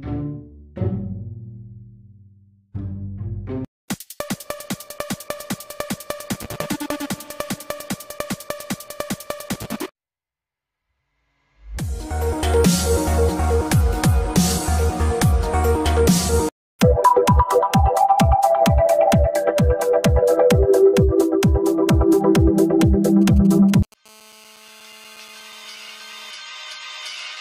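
From 23.22 to 23.94 s, a nearby 2G phone exchanging short signalling bursts gets rectified by the audio circuit, producing GSM signalling bursts: galloping dit-dit-dit ticks and brief 217 Hz buzzes, roughly 30 dB below the signal. From 24.06 to 26.31 s, a nearby 2G phone transmits in bursts 217 times a second as in a call, causing GSM phone buzz: a steady, raspy 217 Hz buzz rich in harmonics, about 29 dB below the signal.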